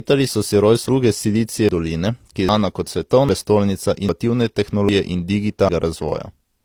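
Transcoding between lossy codecs runs through the whole clip. The speech has a layered, smeared quality: the band-limited character of a low-rate HE-AAC stage, likely around 32 kbit/s, sits under the added coding texture of a later Opus stage that fits about 48 kbit/s. The second encoder spends its bits reproducing the first one's artefacts rather than the original speech. The dulled top end left by the first stage does not come back.

Audio missing between chunks appears as abrupt skips at 1.69, 2.49, 3.29, 4.09, 4.89 and 5.69 s, evenly spaced 0.8 s apart. At each one, about a fifth of a second of speech is gone and the surrounding audio is butted together with no gap, so syllables jump forward. The regular spacing points to processing in 1-second chunks, with the likely cause being a piece dropped each time one chunk closed and the next opened.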